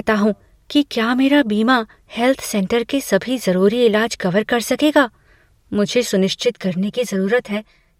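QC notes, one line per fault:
6.4–8.0 s, channel delay (comb filtering): the speech turns hollow and phasey, as one channel lags by roughly 5 ms and the mono sum cancels at evenly spaced notches starting near 100 Hz.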